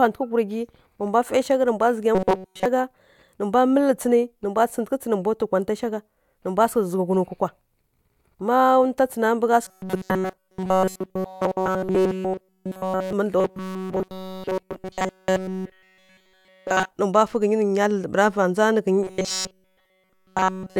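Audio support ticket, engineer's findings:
Robotic sound from repeated short buffers, four stretches: 2.15–2.66 s, 9.66–13.13 s, 13.38–16.93 s, 19.03–20.80 s. Speech goes to a stiff metallic buzz pinned at 188 Hz, which fits a chunk of about 5.3 ms looping. Essentially all of the audio in those spans is repeats. Likely the playback buffer running dry, so the last few ms get replayed while fresh audio is dropped.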